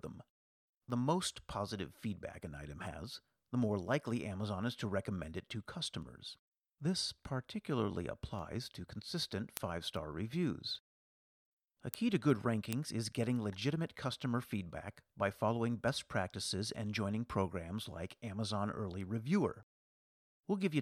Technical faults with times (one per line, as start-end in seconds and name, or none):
0.11-20.61 word clock ticks